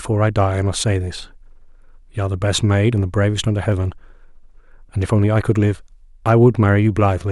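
From 1.89 s to 5.56 s, a click recurs about every 1.83 s, roughly three in all. These are likely clock drift buffer slips: two clocks disagree by around 200 ppm, so a block of about 15 samples gets dropped or repeated. The spectrogram shows thin vertical broadband lines, and the waveform shows step discontinuities.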